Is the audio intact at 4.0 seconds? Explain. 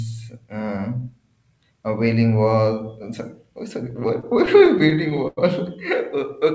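No, the speech drags and stutters from 3.90 to 5.39 s, a repeated stall (stutter): packets arrived late, so the jitter buffer emptied fourteen times and the last sound was stretched to fill each gap.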